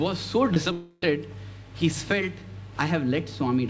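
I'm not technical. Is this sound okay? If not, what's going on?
No. Around 0.54 to 0.58 s there is a short concealed packet loss. About 20 milliseconds of the call's audio didn't reach the receiving end in time, so the receiver guessed at the missing piece by stretching the sound just before it and then blended back into the real audio. You hear it as a tiny smear or wobble, and anything very brief at that moment can simply disappear.

From about 0.72 to 1.04 s the audio sounds artificially drawn out. The receiver seems to have continued the last sound as a buzz or hiss for roughly a third of a second instead of playing what should have been there. This is likely a long network dropout, where nothing arrived for that stretch. The sound fills the gap with no true silence, but it carries none of the real audio, so that part is lost, and the clip picks up again afterwards. Like the rest of this call audio, it has no sound above 8 kHz, which is normal for this kind of call connection.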